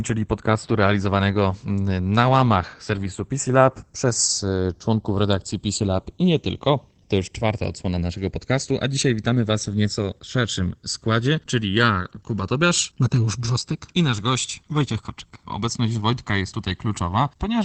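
Throughout, the two channels drift apart: separate clocks, around 70 ppm off, let the inter-channel delay creep to about a millisecond, and mono sums sweep as slow flanging. Opus voice compression is also present for the whole clip, with speech limited to about 8 kHz in SILK mode. Its plainly audible muffled, hoarse character points to roughly 12 kbps.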